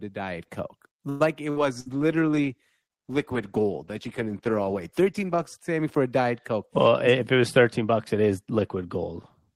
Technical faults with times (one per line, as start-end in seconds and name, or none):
1.09-1.23 call audio freeze
1.50-1.89 burst of packet loss
1.88-5.58 call bitrate drop
6.87-8.29 jitter buffer speed-up